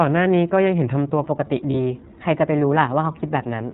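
The whole speech clip passes through the iLBC codec, which fits its 13.33 kbit/s, 30 ms frame mode; with nothing above 4 kHz, the voice sounds muffled, rough and slightly synthetic. From 1.24 s to the end, a section at the wrong speed, likely from playback fitted to the wrong clock, runs 1.12 times fast, raising the pitch by about two semitones and hurrying the speech. At 1.70 to 1.75 s, lost iLBC frames, consistent with a single 30 ms frame, are concealed by repeating the last pitch cycle, giving a brief buzzy, held vowel before the voice recovers.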